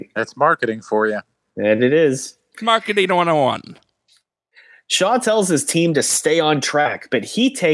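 No technical faults can be heard anywhere in this recording.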